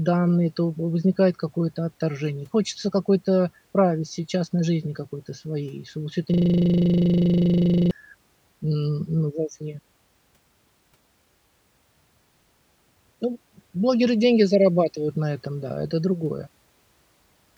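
Right after "всё это", at 6.34 s, a system hang loop kicks in: the machine froze while the audio hardware kept replaying its last 40 ms buffer, around forty times until 7.91 s. Cycling at 25 Hz, it comes across as a rough, steady buzz.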